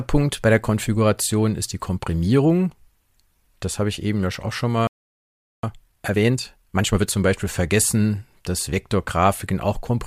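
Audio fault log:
4.87–5.63 s playback stall: the speech just drops out for about 0.76 s, most likely the player starving for data or its thread getting blocked.
5.63–7.15 s time-compressed catch-up: right after, speech runs hurried at 1.5x but keeps its pitch, as small cross-faded cuts clear the backlog.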